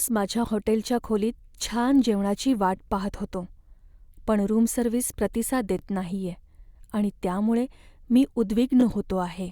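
At 2.77 to 2.79 s, right after "जेवणाची वाट" and before "पाहत होतो", there's a quick stutter, and it comes back at 5.79 to 5.81 s, between "पण रूम सर्व्हिस प्रतिसाद" and "नाहीये आणि त्यामुळे मी", and again at 8.81 to 8.83 s, just after "नाहीये आणि त्यामुळे मी". That's overlapping chunks. The speech was handled in 3-second blocks, each starting 20 ms before the previous one finished, so that sliver plays twice at every join and gives a small click-stutter every three seconds.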